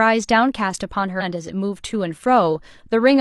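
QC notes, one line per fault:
1.16–1.22 s, damaged data in a compressed stream: a brief glitch as corrupted frames are misdecoded until sync returns.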